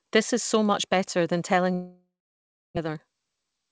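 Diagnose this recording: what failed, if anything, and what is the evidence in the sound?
Right after "much better than telling", from 1.74 s to 2.79 s, the sound breaks into a fading buzz that gives way to about 0.66 s of silence before speech resumes with roughly 0.6 s of content gone. This points to a long network dropout at the network stage, likely a stall in packet arrival that the receiver's concealment covered for about 1.03 s. A brief packet loss would leave only a short smeared patch. Here the concealment runs out and true silence follows.

From 2.88 s to 3.66 s the speech runs about 11% fast at unchanged pitch, sounding hurried, with roughly a tenth of a second removed. This is a jitter buffer speed-up in the receive buffer. After the stall, delayed packets arrived in a bunch, and the buffer cut short pitch-period pieces repeatedly to bring its delay back down. A sample-rate or clock mismatch would raise the pitch along with the speed, but here the pitch holds.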